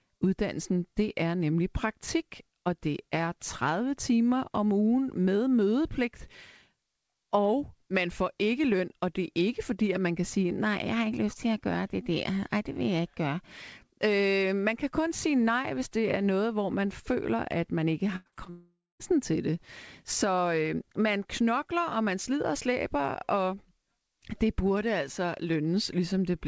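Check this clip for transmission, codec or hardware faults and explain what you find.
Two transmission faults sit back to back just after 18 s, over a call path whose G.722 coding at 64 kbps leaves nothing above 8 kHz.

Repeated packet loss (robotic sound) runs from 18.16 to 18.48 s, right after "føler at man ikke". Four separate gaps, the longest 97 ms, were each patched by extending the preceding sound, so about 56% of that span is concealment. The result is choppy and robotic, with real audio showing between the patches. That alternation is what separates it from a single long dropout.

A long network dropout follows from 18.50 to 19.01 s, ending just before "til det". About half a second of audio never arrived, likely because of a network outage. Here there is no real audio at all. The receiver stretched the last sound into a decaying buzz or hiss, and that concealment faded out, leaving about 230 ms of silence before the signal resumed with the lost portion simply absent.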